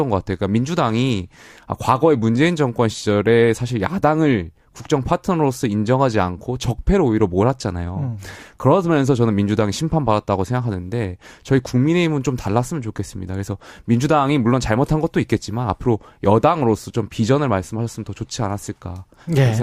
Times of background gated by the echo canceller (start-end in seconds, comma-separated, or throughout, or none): none